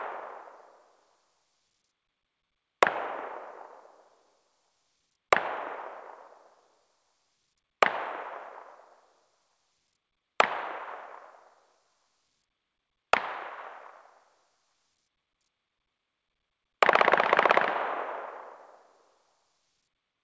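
No technical faults are present in this recording; the sound arrives through a working call path whose content stops at 8 kHz, which fits a wideband codec such as G.722 doing its normal job.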